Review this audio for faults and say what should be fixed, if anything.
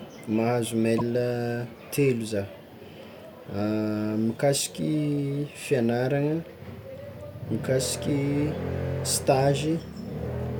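At 0.98 to 1.01 s there's a corrupt frame decoded: flipped bits in a few compressed frames put energy at the wrong frequencies, giving a short burst peaking around -15 dBFS. Adding checksums or error concealment so damaged frames get dropped or masked would prevent it.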